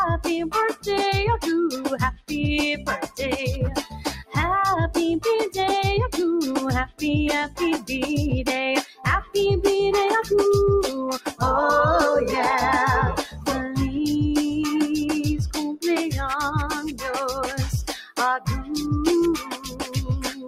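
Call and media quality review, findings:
Noise suppressor applied to music or sounds, whole clip: speech-tuned suppressor left active, treating steady tones, ambience and tails as noise. Level pumps by around 10 dB. Waveform envelope breathes; spectrogram shows sustained bands fading while onsets stay intact.

Sound cut by the noise suppressor, at 0.73–0.88 s (about 16 dB), 2.14–4.36 s (about 18 dB), 6.86–7.9 s (about 19 dB), 8.83–11.41 s (about 16 dB), 13.23–13.48 s (about 10 dB), 16.84 s to end (about 16 dB). Held content and decays sink. Waveform shows dips and truncated tails; spectrogram shows darkened sustained regions.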